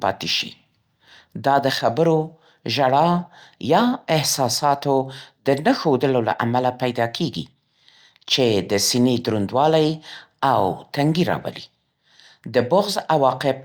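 Nothing in this recording stands out as a technical fault, so there's nothing to flag at any point along the way.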